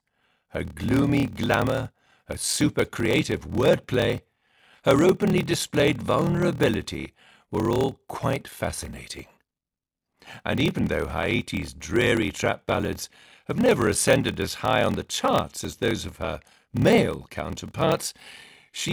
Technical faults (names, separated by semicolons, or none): block size mismatch (padded)